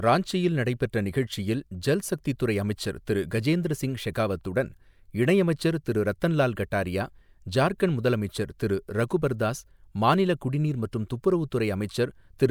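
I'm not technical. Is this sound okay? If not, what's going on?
Yes, nothing stood out as a problem when listening to this recording.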